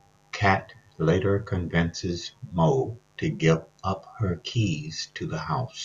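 Mains buzz runs throughout: switching spikes at twice the 50 Hz cycle leak in, leaving a steady, raspy buzz about 40 dB below the speech.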